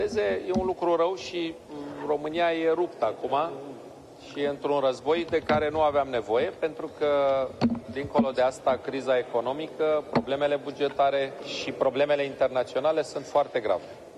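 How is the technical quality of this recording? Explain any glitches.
No technical faults are audible anywhere in this recording.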